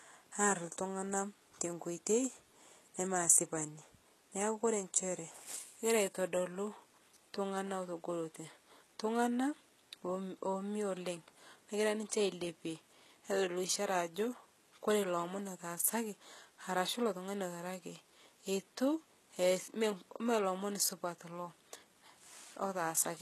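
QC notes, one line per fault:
Throughout, HE-AAC compression, likely: the treble above the crossover is rebuilt by copying lower bands upward, so sibilants sound gritty and lispy, with plainly audible damage, nothing above 12.3 kHz, and a bitrate of roughly 16 kbps.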